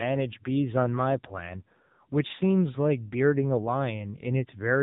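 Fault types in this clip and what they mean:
AMR narrowband mobile codec: The speech passes through the mobile-network speech coder, which resamples to 8 kHz and rebuilds the voice from a vocal-tract model excited by a few pulses per subframe. Here nothing remains above 3.8 kHz, so sibilants and breath detail are gone. The damage is heavy, with a buzzy, synthetic quality throughout, which fits one of the codec's low-rate modes, around 6.7 kbps.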